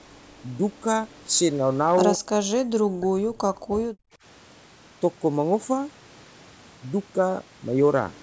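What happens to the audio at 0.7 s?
Nothing goes wrong at 0.7 s: the speech there is intact, carried through the call's microphone processing, whose trimming of the deepest bass is normal and not a fault.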